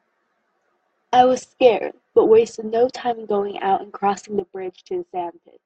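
A speech clip with a sudden gain jump at 4.40 s: level drops by about 11 dB in a single step and stays down to the end. The background noise falls with it, so a gain setting likely changed without a ramp, rather than a fade or compressor.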